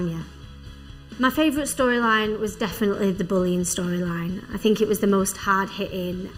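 The audio has channel delay (comb filtering) for its whole length. One channel arrives late by roughly 0.7 ms, and when the two are summed to mono, content common to both cancels wherever the offset equals half a period. The first notch falls near 700 Hz, with further notches repeating at odd multiples, around 2 kHz and 3.5 kHz. This fixed, evenly spaced pattern gives the sound a hollow, phasey colour that does not move over time.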